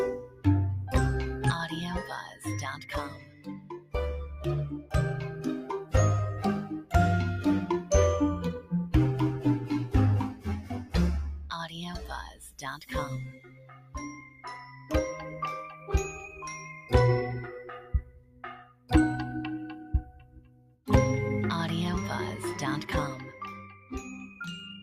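A noise suppressor applied to music or sounds stays active throughout, treating sustained tones, ambience and decay as noise, with gain swinging by around 15 dB. Onsets pass while held material sinks, so the level pumps; a waveform shows breathing envelopes, and a spectrogram shows shortened, darkened tails.

Sound cut by the noise suppressor occurs at 0.2–0.45 s (about 13 dB down), 2.26–3.94 s (about 14 dB), 10.34–10.94 s (about 11 dB), 11.67–14.91 s (about 14 dB), 16.73–16.92 s (about 6 dB), 17.8–18.91 s (about 14 dB), 20.05–20.87 s (about 14 dB) and from 23.65 s to the end (about 11 dB). In each, steady or fading content is pulled under the surrounding level and decays are clipped short, heard as sudden hollowing. These appear as dips in the waveform envelope and darkened, cut-short sustains on the spectrogram while onsets stay visible.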